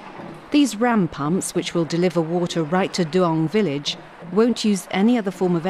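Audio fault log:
Nothing here to log; the audio comes across without any audible trouble.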